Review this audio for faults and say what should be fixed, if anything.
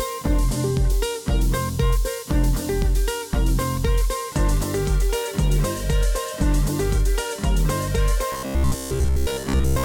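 From 8.32 s to 9.84 s the sound collapses into a rigid, metallic buzz at 66.7 Hz, which is robotic sound from repeated short buffers. Fresh audio was likely arriving too slowly, so playback kept looping the last 15 ms chunk while most of the real material got skipped. A larger jitter buffer or steadier delivery upstream would keep playback fed and stop the looping.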